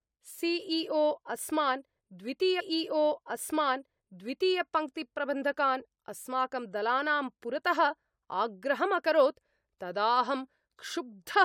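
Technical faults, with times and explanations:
2.59 to 4.60 s, stream segment repeated: about 2.0 s of the speech plays a second time, with a brief blip where playback jumps back. The player fetched or queued the same segment twice, so that stretch of the programme runs again.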